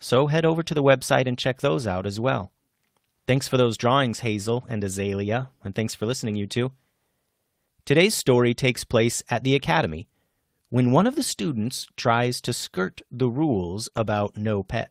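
At 6.29 to 6.35 s, between "and thanks for" and "you two", there is a lost packet rebuilt from error correction. About 40 ms of speech, which fits two 20 ms packets, comes from the low-bitrate redundant copy carried in the following packet, so nothing drops out. The patch sounds grainier and noisier than the surrounding audio. The same thing happens at 11.63 to 11.65 s, after "when one of the" and before "tries to skirt the", where a single rebuilt 20 ms frame gives a brief rough spot.

Near the end, a short concealed packet loss runs from 13.89 to 13.93 s. About 20 ms of audio arrived too late for the decoder, which extended the preceding sound for roughly 17 ms and then crossfaded back, leaving a quick smear or wobble. Directly after it, at 13.93 to 13.99 s following "to skirt the rules", another roughly 40 ms stretch is rebuilt from error correction and has the same coarse, noisy texture.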